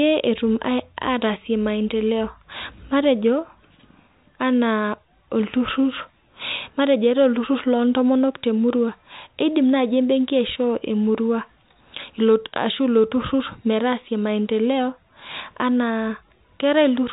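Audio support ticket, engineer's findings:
No faults found in the speech signal: the audio is band-limited to 4 kHz, consistent with a G.711 mu-law telephone path, and its codec texture is at most faint.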